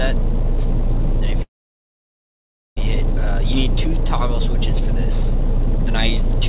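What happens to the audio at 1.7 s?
At 1.7 s you're in the middle of a gap running from 1.42 to 2.79 s. The sound carries on for a moment as a brief fading tail, then drops to silence for about 1.3 s before picking up exactly where it stopped, with nothing skipped. That pattern points to a call audio freeze, likely packets stalling and the jitter buffer running dry. The audio is held back about 1.35 s, and it stays band-limited to 4 kHz throughout, as usual for G.711.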